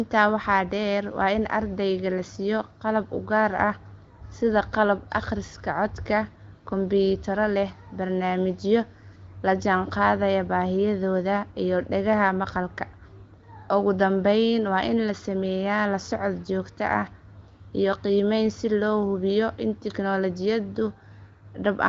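No technical faults occur anywhere in this speech recording, which comes through the AMR wideband (HD Voice) codec with nothing above about 7.4 kHz.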